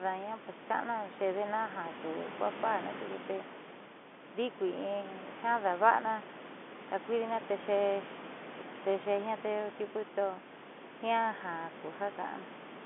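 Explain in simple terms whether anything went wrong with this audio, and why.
Nothing went wrong here.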